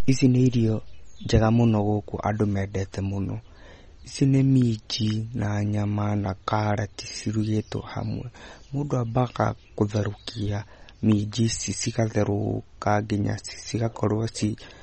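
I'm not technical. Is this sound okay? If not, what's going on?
No. From start to finish the speech sounds plainly watery and swirly, with a dull top end because nothing above about 11.2 kHz survives, and the s sounds come out smeared and metallic. That is likely MP3 compression set too low, throwing away detail to shrink the file.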